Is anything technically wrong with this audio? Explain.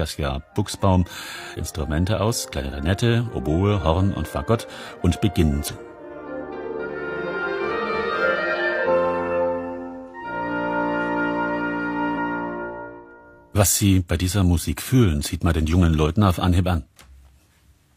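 Yes. Four bursts of damaged data in a compressed stream occur, at 1.54–1.59, 5.67–5.73, 8.83–8.88 and 12.12–12.18 s. Corrupted bytes make the decoder misread frames and lose sync while it hunts for the next header, so each spot sounds like a brief chirp or blip.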